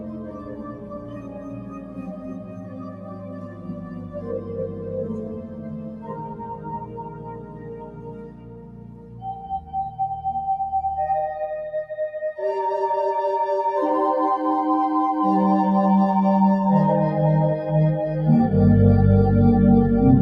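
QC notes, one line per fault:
Throughout: noise suppressor applied to music or sounds. Level rides up and down by around 20 dB, so the audio pumps, flutters or thins out. A suppressor tuned for speech is treating steady tones, ambience and decays as noise and pulling them down.
0.00–9.99 s: sound cut by the noise suppressor. Across this first half the sound sinks below the rest of the clip, by about 13 dB at its deepest. The suppressor judged this material to be noise and turned it down harder.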